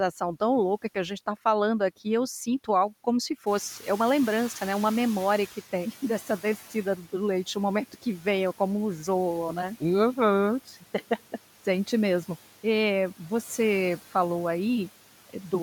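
Noise suppressor artifacts run through the whole speech clip. The suppressor lowers the bands it judges to be steady noise by about 11 dB, frame by frame, so the background dips between phrases and swells back under the voice.

From 3.46 to 5.61 s the noise suppressor is catching up. The room noise jumps by about 15 dB at around 3.5 s, and the suppressor's noise estimate lags, taking 2.15 s to adapt. The louder background comes through at first, then sinks as the reduction settles back toward about 9 dB.

Between 6.27 and 6.75 s there is speech cut by the noise suppressor. It mistakes parts of the voice for noise and turns them down with the background, by about 7 dB at the deepest point. Only about a tenth of a second is affected in total, and those fragments sound swallowed and faint.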